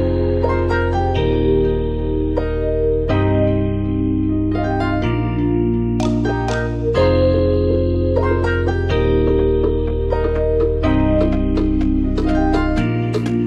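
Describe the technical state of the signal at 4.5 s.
Around 4.5 s the signal is intact, with no technical fault audible at that point.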